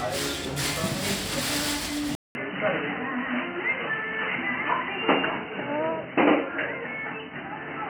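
At 2.15 s the sound drops out for about 200 ms, then returns dull and boxy with nothing above 3 kHz and a new, faint noise floor roughly 40 dB down. It stays that way to the end, at about the same level. Unlike a gradual filtering or codec bandwidth drop, the gap and fresh background noise point to the likely cause: the input switched to a poorer device.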